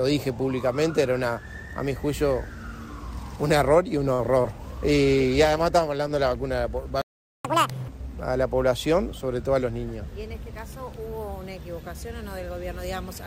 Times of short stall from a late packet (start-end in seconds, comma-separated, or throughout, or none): 4.13-4.32